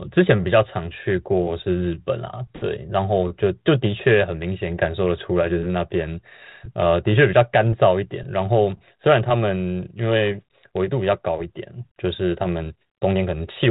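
Nothing stood out on listening to this speech, which comes through a 32 kbit/s G.726 ADPCM path with the band-limited telephone character that path gives.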